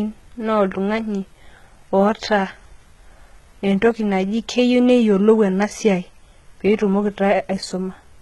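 The speech has likely been through HE-AAC compression at a very low bitrate, consistent with about 16 kbps, and the damage is heavy from start to finish. Only the lower spectrum is truly coded. The treble is rebuilt by copying lower bands upward under a coarse envelope, with nothing above 11.8 kHz. The top end stays bright but false, with harmonics mismatched at the crossover, so s sounds turn gritty, metallic and lispy.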